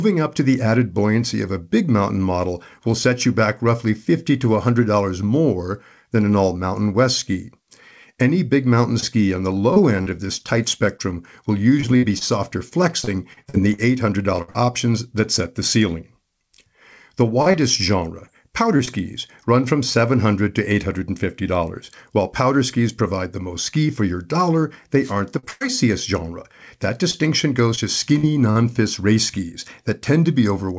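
Packets of the call stopped arriving on time again and again from 9.00 to 14.56 s, just after "big mountain" and ending before "options that set the". This is repeated packet loss, with robotic sound. The receiver bridged roughly eighteen separate holes, the longest 60 ms, by extending whatever sound came before each one. Concealment fills about 10% of that stretch, so the speech turns choppy and takes on a machine-like edge, with small pieces of it gone.

The same repeated packet loss returns from 17.42 to 18.89 s, leading up to "run from". This stretch has fewer holes, about six, the longest 37 ms, and together they make up about 9% of the span. Each gap is again covered by carrying the previous sound forward, so the speech stutters and sounds robotic rather than dropping out cleanly.

At 25.01 to 25.14 s a wireless microphone noise hit appears. The analogue radio link faded as reflected signals cancelled each other at the receiver, and its background noise surged up through the speech as a short swish of static lasting about an eighth of a second.

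A short concealed packet loss follows at 25.39 s, where 40 ms of audio never reached the decoder in time. The receiver extrapolated across the hole and blended back into the real signal, leaving a brief smear or wobble.

Almost immediately after, from 25.51 to 25.63 s, comes a burst of packet loss: about 100 ms in a row went missing. The receiver prolonged the last sound while turning it down, so it comes out as a held buzz or fading hiss. The speech then picks up further along, and the audio in between is lost.

Repeated packet loss appears a third time from 27.11 to 28.57 s, ending before "race skis". There are about four gaps, the longest 43 ms, covering about 9% of the span, and the speech again becomes choppy and robotic. Throughout the clip the call codec passes nothing above 8 kHz, which fits G.722 at 64 kbps.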